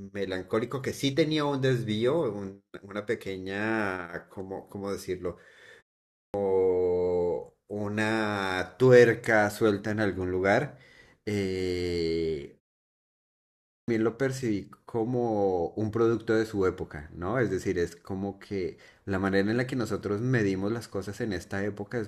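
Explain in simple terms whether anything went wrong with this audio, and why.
Clipped start after a pause at 6.07 s and 13.61 s: after silences of 0.33 s and 1.09 s, the playback device dozed off and took about 0.27 s to wake, so the speech restarts abruptly with its opening sounds missing.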